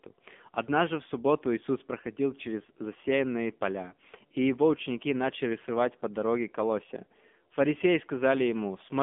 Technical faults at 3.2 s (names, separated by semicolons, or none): AMR narrowband mobile codec